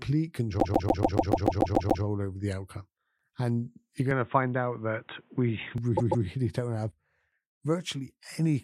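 From 0.59 to 2.03 s there are repeated frames: the same 144 ms chunk of speech plays ten extra times, which sounds like a machine-gun stutter. That adds 1.44 s to the clip, and the chunk length fits a run of six compressed frames being resent.

Between 4.11 and 5.78 s the speech suddenly goes dull and boxy, with nothing above 3.8 kHz, and a faint new noise floor sits well under it. The level doesn't jump and there's no gap. That's likely the input switched to a poorer device, then back.

A second, shorter burst of repeated frames runs from 5.97 to 6.25 s. The same 144 ms block plays twice more, giving a quick double stutter that adds 0.29 s.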